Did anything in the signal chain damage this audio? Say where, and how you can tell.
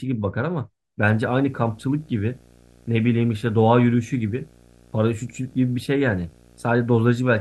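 Yes. From 1.08 s to the end, a video or display buzz sits under the speech at 59.94 Hz, roughly 25 dB down, with hash above it, plus a whine at 15.7 kHz. A screen or video cable is coupling into the analogue wiring.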